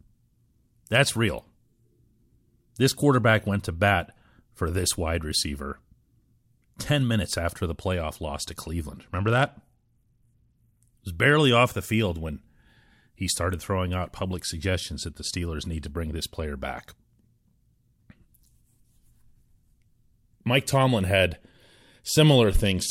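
At 8.95 s, right after "the playoff loss to", the speech turns dull and gritty until 10.81 s, and again from 22.51 s to the end: a Bluetooth SBC bit pool drop, where starved upper sub-bands vanish and coarse quantisation adds grit, consistent with a fall from 28 to 12, roughly 96 kbps.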